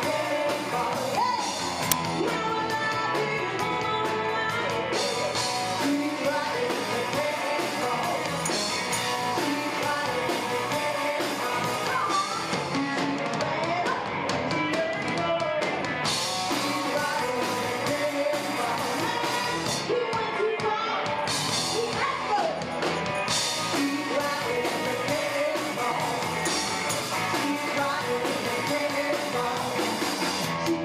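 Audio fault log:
1.92 s, uninitialised buffer: A sharp, loud crack cuts into the sound for about 5.8 ms. A playback block was sent out before any audio had been written into it. The converter then played whatever stale data sat in that memory, as if it were samples. Those values bear no relation to the surrounding signal, so they arrive as harsh garbage. The burst length fits a 256-sample buffer.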